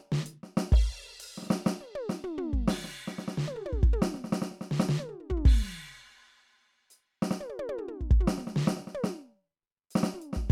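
No technical faults can be heard anywhere in this music clip, with the signal staying continuous and stable throughout.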